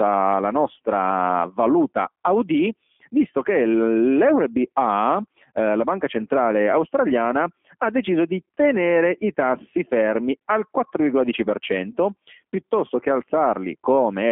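Speech coded throughout with the G.729 codec: the whole clip is confined to a telephone band of about 250 Hz to 3.4 kHz, with nothing above 3.5 kHz, and has a plainly rough, synthetic texture from pulse-based excitation, which fits an 8 kbit/s stream.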